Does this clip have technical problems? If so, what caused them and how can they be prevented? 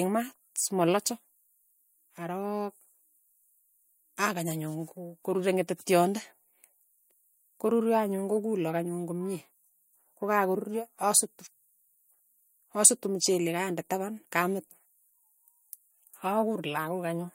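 No technical faults are audible.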